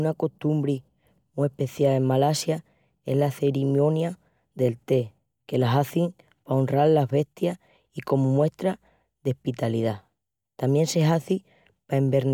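Nothing in the recording stood out as a technical problem on listening.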